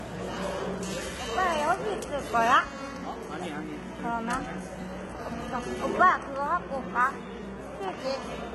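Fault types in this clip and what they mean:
Transcoding between lossy codecs: two codecs' artefacts are heard layered, smeared warbling plus MP3-style swirl, which points to a very low-rate HE-AAC encode likely re-encoded as MP3. On a spectrogram, everything stops sharply at 11.8 kHz, with patchy, blocky energy below.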